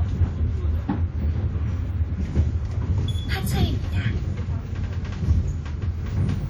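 Throughout the clip, plainly audible damage of the kind left by WMA compression, likely from a stream around 48 kbps. The transform codec's long blocks smear quantisation noise across tens of milliseconds, giving a ringing, washy texture and hiss that breathes with the sound. Content reaches about 20.1 kHz.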